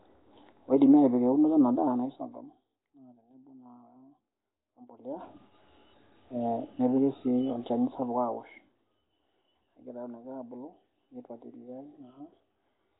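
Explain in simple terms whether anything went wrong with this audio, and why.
Yes, something went wrong, and it lasts the whole way through. The speech has a rough, hissy fuzz around it and a smeared, underwater feel, and everything above about 3.8 kHz is simply gone, so it sounds muffled. That points to Nellymoser compression, likely from the old Flash microphone codec. It squeezes sound into a tiny budget, skips weak frequency bands entirely and fills them with noise. The gentle volume rises and dips come through cleanly.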